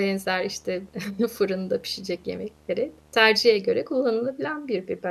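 Speech with video or display buzz from the start to 3.58 s. A display or video cable is coupling into the audio path. It adds a buzz at the 75 Hz field rate, with hash above it. The buzz sits roughly 30 dB below the speech.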